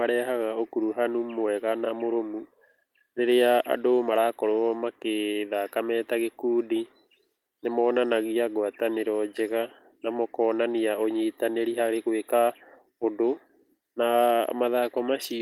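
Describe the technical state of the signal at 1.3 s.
At 1.3 s the speech signal is intact, with no dropout, clipping, glitch or other technical fault.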